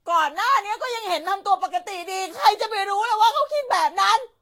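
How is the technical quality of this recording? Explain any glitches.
Technical quality is poor throughout the speech, owing to generation loss. Across the whole clip the sound is swirly, hollow and smeared, with blurred consonant attacks and nothing above 16.6 kHz. The likely cause is repeated Vorbis re-encoding, around seven passes at a rate that fits roughly 60 kbit/s. Each pass quantises on a shifted frame grid, so the errors compound. A single encode at that rate would sound cleaner and less smeared.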